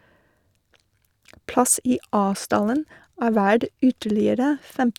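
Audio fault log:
Nothing in this speech recording stood out as a fault on listening.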